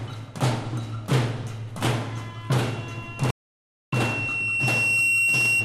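A recording of everyday sounds develops loudspeaker feedback squeal from 2.59 s to the end. A single 2.7 kHz tone swells over about two seconds to roughly 5 dB above the sound, as the microphone re-captures its own loudspeaker. A spectrogram shows this as a bright horizontal line that brightens steadily. A playback stall from 3.31 to 3.93 s silences everything for 0.62 s, likely because the player ran out of data. It appears as a flat waveform and a full-height blank gap.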